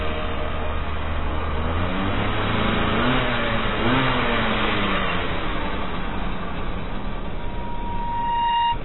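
Throughout, the sound is dull and smeared, with nothing above 4 kHz. This is likely heavy AAC compression, consistent with a bitrate near 16 kbps. At 7.37 s, a loudspeaker feedback squeal begins. A 946 Hz tone swells over about a second, reaching roughly 5 dB above the sound, until 8.79 s.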